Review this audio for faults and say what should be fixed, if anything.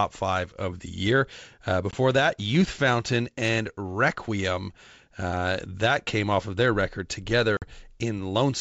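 Packet loss on an ADPCM call hits twice: a 20 ms hard-edged gap at 1.91 s (a couple of packets) and a 50 ms one at 7.57 s, right after "off of their record". Each gap knocks the decoder's predictor and step size out of sync with the sender, so the sound returns slightly distorted before settling. Packet loss concealment plus a decoder state reset on loss would prevent it.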